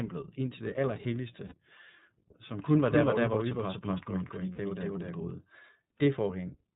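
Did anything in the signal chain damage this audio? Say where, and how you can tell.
Yes. At the codec stage, the whole clip is band-limited at 4 kHz with a rough, slightly synthetic texture throughout. That is the iLBC codec: each frame's excitation is coded independently at low rate, which fits the 13.33 kbps mode with 30 ms frames.

At the network stage, two short dropouts appear as lost iLBC frames at 1.47 to 1.55 s and 4.53 to 4.59 s, each about 60 ms, consistent with two 30 ms frames. The decoder repeats the last pitch cycle with added noise, giving a brief held, buzzy vowel, then recovers immediately.

In the capture path, a doubled audio track runs from 2.65 to 5.31 s. A full-band copy at roughly equal level trails by around 200 ms, with no decay or room colouring, and cuts in and out abruptly. It is likely a second, slower capture path mixed back in.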